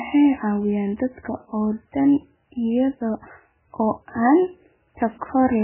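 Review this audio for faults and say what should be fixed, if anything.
MP3 compression, heavy, throughout the clip: the speech has nothing above 3 kHz and a watery, swirling texture with smeared onsets. This is likely a starved MP3 encoder that cut the treble and switched weak frequency lines on and off between frames, which fits a bitrate near 8 kbps. To prevent it, encode from the original at a much higher MP3 bitrate or keep a lossless copy.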